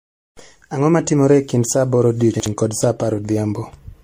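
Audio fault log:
throughout, generation loss. The speech sounds swirly, smeared and hollow, more than a single low-bitrate encode would leave. Consonant onsets blur and lose their edge. Nothing remains above 16.3 kHz. The likely cause is repeated lossy re-encoding, around seven passes, which fits an MP3 chain at 64 kbit/s. Each pass quantises again on a shifted frame grid. So noise and spectral gaps pile up rather than staying fixed.
2.34 to 2.46 s, chunks out of order. Just after "e kind saa aboro" the sound jumbles briefly before "kod saa" resumes. A 60 ms chunk plays one chunk late, after the piece that should follow it. No audio is missing, but the sequence is swapped. Three hard joins result. The reordered fragments make the moment sound garbled.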